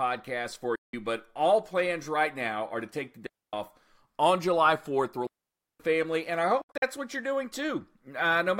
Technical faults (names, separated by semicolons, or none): Bluetooth dropout; digital wireless dropout